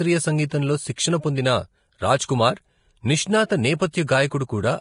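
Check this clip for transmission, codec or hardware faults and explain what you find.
One codec fault runs through the whole speech clip. Vorbis compression, throughout: the damage is most likely from a Vorbis encoder set to low quality, which fits a rate around 32 kbps. The encoder describes each frame as a smooth spectral envelope plus a residue. Starved of bits, it removes everything above 10.5 kHz and quantises the remaining treble so coarsely that fine detail turns into noise. The result is heavy damage: a hissy, grainy upper band, roughened tone and softened consonant attacks.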